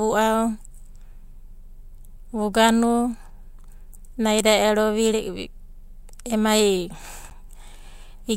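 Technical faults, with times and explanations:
7.30 to 7.32 s, corrupt frame decoded: a brief glitch cuts into the speech near the end, peaking around -30 dBFS and lasting only a few hundredths of a second. It sounds like this because damaged bits inside one compressed frame were still decoded. The decoder read wrong gains or codes and placed energy at frequencies that don't belong to the speech. The stray sound lasts for about that single frame and stops as soon as clean data resumes.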